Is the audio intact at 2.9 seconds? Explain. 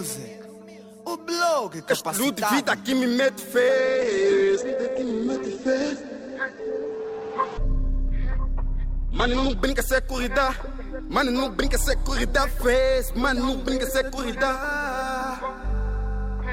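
Yes, the audio is intact at 2.9 seconds, with no fault audible at that moment.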